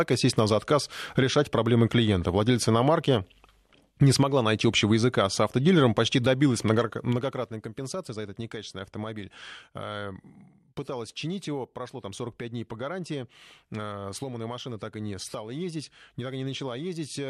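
A speech recording with zipper noise from 6.70 s to 7.70 s. It falls between "с автодилером почти добилась" and "за этот некачественный автомобиль". Across that second, the level drops by roughly 15 dB. It does not glide down. It moves in 1 dB steps, around fifteen per second. Each jump leaves a small click, so a fine ticking rides on the sound while the level falls. The gain change is applied in coarse increments without smoothing.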